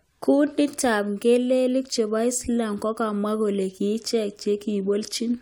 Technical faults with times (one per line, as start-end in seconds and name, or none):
none